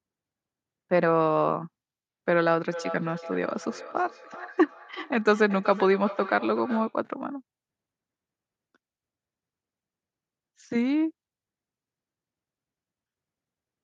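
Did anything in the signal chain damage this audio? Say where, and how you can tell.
Yes. The damage is in call processing: a feedback echo between two devices. From 2.72 s to 6.99 s, the speech returns roughly every 0.4 s, at about 15 dB below the direct speech. One device replays the other's microphone, and that microphone picks the sound up again.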